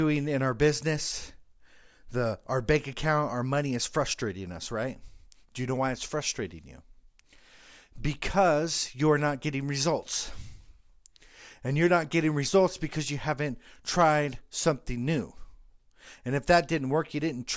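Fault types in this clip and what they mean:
No faults are audible anywhere in this recording.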